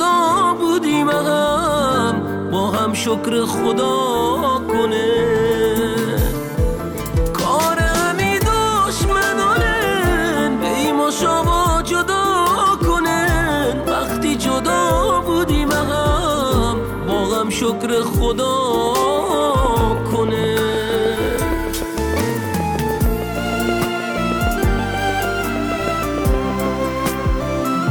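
A train of clicks runs from 18.87 to 26.67 s: around fifty similar pulses at a regular 6.4 per second, peaking well above the sound and audible in pauses too. They likely come from interference from nearby equipment or a faulty connection or power supply injecting repeated spikes.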